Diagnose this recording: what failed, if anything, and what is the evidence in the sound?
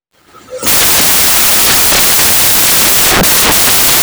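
The sample-format conversion failed: the audio was rebuilt from the wrong bytes throughout. Loud, harsh broadband noise, close to white on the louder speech, runs through the clip. Unlike steady hiss, the noise follows the signal, because scrambled low-order bits now dominate each value.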